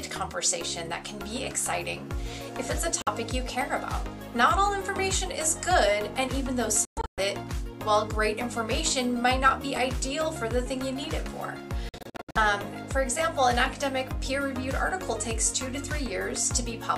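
Audio packets likely arrived too late at the headphones and were discarded (a Bluetooth dropout), so the output fell silent until good packets returned. The holes span 3.02–3.08 s (46 ms), 6.85–7.20 s (255 ms lost in bursts, longest 116 ms) and 11.89–12.37 s (279 ms in bursts, longest 70 ms). Each time, the sound resumes as though it had played on.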